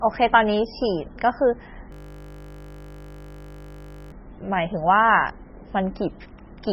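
Throughout the speech, nothing sounds above 5.6 kHz and the sound is heavily watery and swirly, likely from MP3 compression at a very low bitrate. A spectrogram shows a flat ceiling with flickering gaps. From 1.92 to 4.12 s, a system hang loop repeats one 20 ms piece over and over, giving a steady 50 Hz buzz. The waveform shows an identical repeating cycle.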